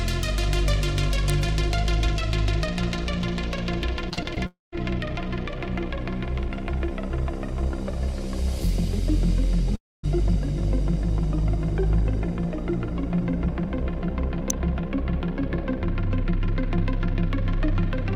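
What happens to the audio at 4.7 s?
At 4.7 s the sound is at the tail of a gap. From 4.46 s the last bit of audio carries on as a buzzy, fading smear, then thins to silence for about 150 ms before the audio picks up again at 4.74 s, with roughly a quarter second of material simply gone. This is likely a long network dropout: packets stopped arriving, the receiver stretched the final sound to cover the hole, and then gave up until data returned.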